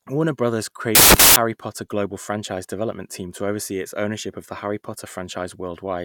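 A reader assembling samples from the wrong bytes, off by a byte or with the byte order swapped, corrupts this speech clip from 0.95 s to 1.36 s. With the bytes misassembled, the rapidly fluctuating low-order bits land in the high-order position of each sample, so for those four-tenths of a second the audio turns into loud, harsh broadband noise that masks the signal.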